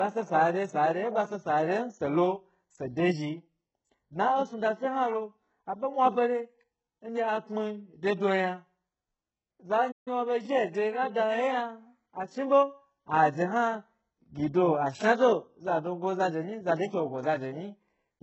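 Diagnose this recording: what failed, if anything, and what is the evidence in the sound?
Codec stage: the speech has heavy codec damage throughout, with upper bands that sound synthetic rather than natural. Sibilants come across gritty and lispy, with a metallic edge where the rebuilt treble meets the coded lower band. This points to a very low bitrate, around 8 kbps, and the likely cause is HE-AAC compression, where spectral band replication copies lower bands upward under a coarse envelope, so the harmonics fail to align across the crossover.

Playback stage: the audio cuts out in mid-flow from 9.91 s to 10.08 s, a gap of about 145 ms, then resumes. The silence is clean, with no noise or repeated fragment filling it, which is how output behaves when the player is starved of data or its thread is blocked and nothing reaches the device. The likely cause is a playback stall of that kind, cleared once the player recovered.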